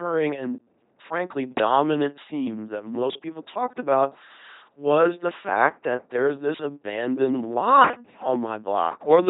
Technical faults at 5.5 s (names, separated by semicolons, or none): LPC-10 vocoder